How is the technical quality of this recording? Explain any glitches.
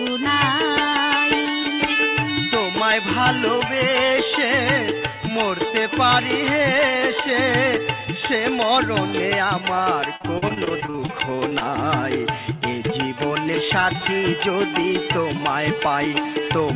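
The recording has one clear glitch. It comes through a band-limited call path with nothing above 4 kHz, which fits a G.711 A-law codec at 64 kbps.

Repeated packet loss (robotic sound), 10.16 to 11.63 s: packets dropped out in quick succession, and each hole, the longest about 41 ms, was filled by stretching the sound just before it. A quarter of this stretch is concealed, so it turns choppy and robotic, with pieces missing.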